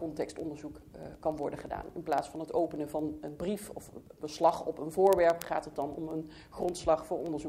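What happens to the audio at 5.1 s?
At 5.1 s the sound carries word clock ticks, running from 0.11 to 7.44 s. An unlocked receiver clock, off by a few hundred ppm, slips one sample roughly every 50 ms, giving sharp, uneven ticks that show as evenly spaced thin vertical lines on a spectrogram and tiny steps in the waveform.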